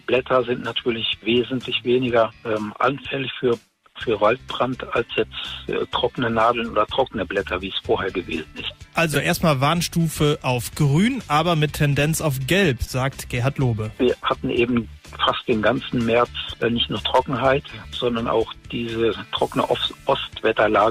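Two short bursts of corrupt frame decoded. At 9.13 to 9.16 s there's a loud glitch, peaking around -5 dBFS, about a single frame long. At 12.84 to 12.90 s a quieter glitch spans roughly two frames. In both, damaged bits in the compressed frames reached the decoder, which played them anyway and turned bad gain or spectral data into energy at frequencies the audio never had.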